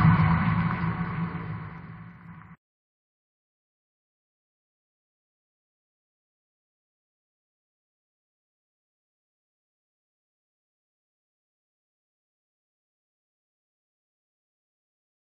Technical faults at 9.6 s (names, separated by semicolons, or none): none